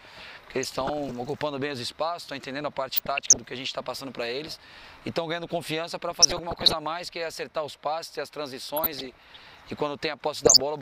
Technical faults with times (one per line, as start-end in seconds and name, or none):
0.63-1.11 DAB burbling
2.94-3.37 DAB burbling
6.10-6.73 DAB burbling
8.77-9.41 DAB burbling
10.45-10.61 DAB burbling